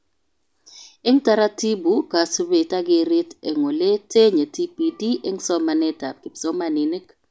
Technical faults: none

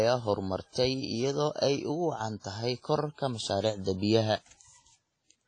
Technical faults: WMA compression

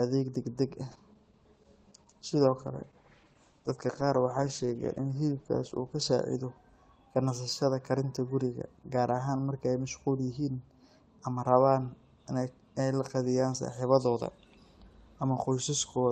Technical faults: call bitrate drop

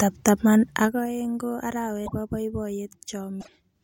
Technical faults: broken MP3 bit reservoir

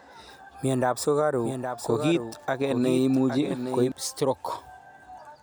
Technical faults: doubled audio track

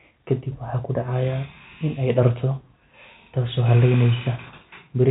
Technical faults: none

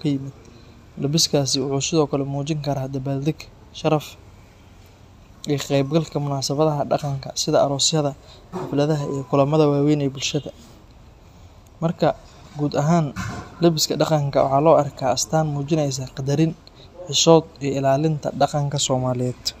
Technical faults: none

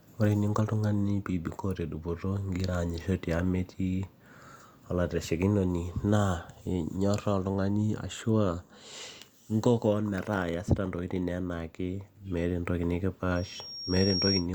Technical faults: loudspeaker feedback squeal

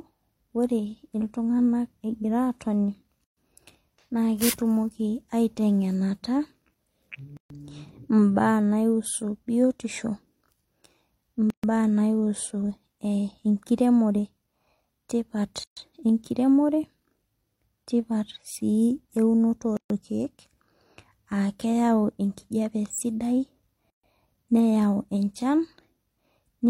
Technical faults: gap at a join of encoded pieces

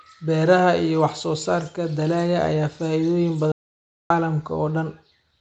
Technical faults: audio dropout to silence

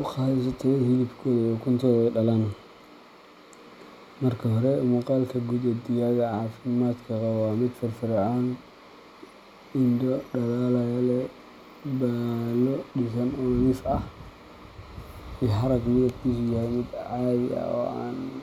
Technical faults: none

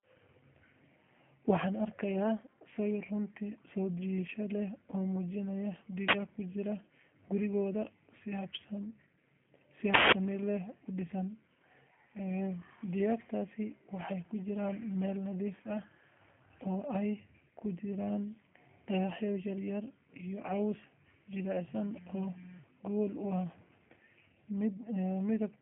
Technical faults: G.729 codec; uninitialised buffer

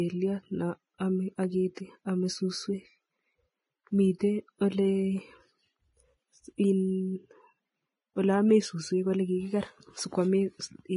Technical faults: Vorbis compression; pre-echo

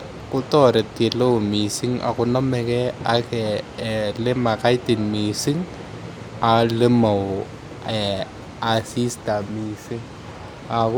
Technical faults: word clock ticks

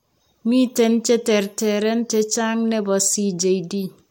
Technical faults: none

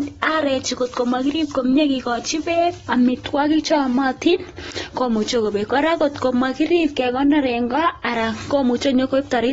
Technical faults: AAC compression

